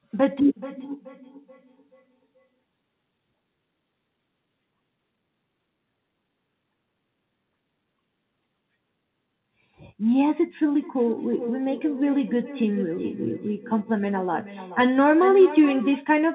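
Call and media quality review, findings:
Feedback echo between two devices, 0.48–2.64 s and 10.74–16.08 s. Speech returns about every 0.4 s, thinner and ringing, peaking about -18 dB then about -13 dB below speech. A second device in the room is replaying the call into a microphone its canceller can't subtract. Call path band-limited to 4 kHz.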